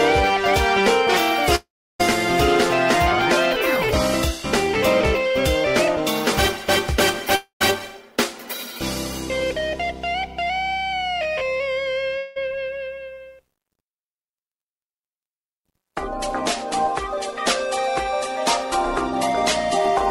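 At 1.55 s the audio smears into a fading buzz that runs to 2.01 s, with roughly a third of a second of silence inside it. At 7.35 s a shorter buzz, about 0.1 s of it silent, lasts to 7.62 s. At 12.18 s a brief hiss with no gap holds until 12.38 s. Each time the sound resumes further on with a piece missing, likely a long network dropout where the receiver stretched the last sound over the lost stretch.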